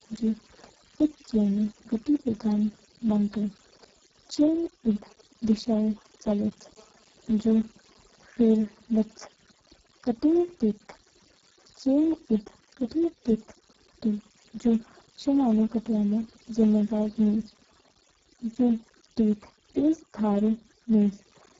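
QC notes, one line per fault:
throughout: overdone noise removal. The denoiser bites too hard, pulling bands near its noise guess right down, so the background goes dead with twinkly specks.
throughout: Speex codec, heavily damaged. The bitrate sounds like roughly 6 kbps, so speech comes out hoarse and noisy, and there's nothing above 7.7 kHz.
4.96 to 6.63 s: GSM signalling bursts. A nearby 2G phone's radio bursts get rectified into a galloping dit-dit-dit of short 217 Hz buzzes, roughly 20 dB below the speech.
6.77 to 9.27 s: GSM phone buzz. Steady raspy 217 Hz buzz full of harmonics from a phone in a call, rectified by the audio circuit, about 30 dB under the speech.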